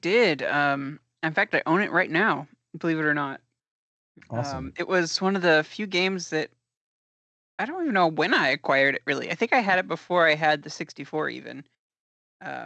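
No technical faults can be heard anywhere in the recording.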